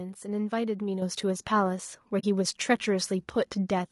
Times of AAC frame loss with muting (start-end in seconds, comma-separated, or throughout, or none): 2.19-2.24